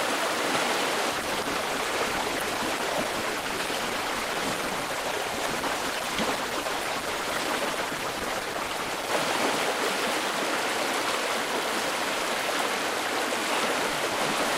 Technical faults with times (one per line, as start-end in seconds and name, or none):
1.11-9.11 adaptive stream at a lower bitrate